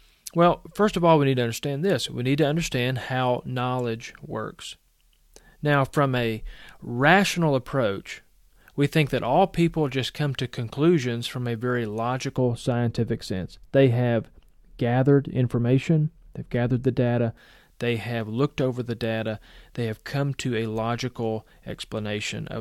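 From 12.37 s to 17.37 s the speech suffers de-emphasis applied wrongly: a treble-cut filter, intended to reverse pre-emphasis that was either never present or already undone, rolls off the top end smoothly, leaving 10 kHz about 11 dB below 1 kHz, so the voice turns dull and muffled.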